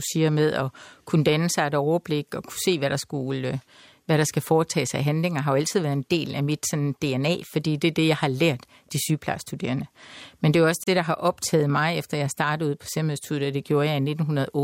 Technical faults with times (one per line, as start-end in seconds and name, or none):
10.84-10.87 gap at a join of encoded pieces